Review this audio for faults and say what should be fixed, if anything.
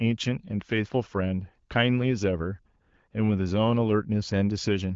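No faults turn up in this audio, so nothing needs to be fixed.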